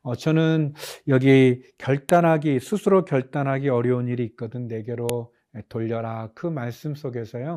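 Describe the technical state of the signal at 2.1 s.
At 2.09 s the speech is broken by a file header played as audio: a single sharp, loud click or snap. Where separate WAV pieces were joined or streamed back to back, one piece's header was left in, so its few dozen bytes of metadata are read as sample values. On a waveform this looks like a near-vertical spike cutting across the speech envelope. On a spectrogram it is a thin vertical line spanning the full frequency range.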